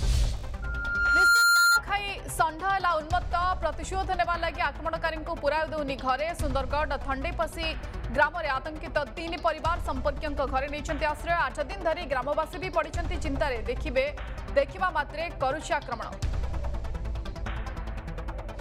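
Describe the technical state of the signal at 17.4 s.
At 17.4 s the signal is intact, with no dropout, clipping, glitch or other fault to be heard at that point.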